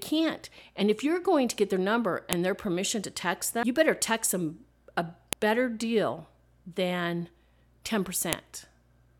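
At 2.33, 5.33 and 8.33 s the speech is broken by a sharp, loud click, each exactly 3.0 s apart. This is a file header played as audio: pieces were joined with their header bytes left in. The strict 3-second spacing, regardless of the signal, separates it from random dropout clicks.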